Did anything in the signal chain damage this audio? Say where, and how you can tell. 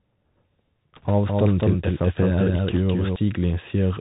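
Yes, in a few places. The codec stage is the constant one: it's Bluetooth CVSD headset coding throughout. Nothing gets through above 4 kHz, s sounds come out scratchy, and a granular hiss sits under the speech. That all fits a 64 kbps CVSD link.

There are also bit errors on the Bluetooth voice link, at 0.96–1.11 s and again at 2.71–2.77 s. Both bursts bring a rushing, crackly noise with no sharp clicks, because every CVSD bit carries only a small step. That sounds like an error rate of a percent or so.

From 1.28 to 3.16 s there's a doubled audio track. A full-band copy runs about a fifth of a second behind, roughly 5 dB down, and has no decay or room colour. It cuts in and out abruptly, so it's likely a second, slower capture path mixed in.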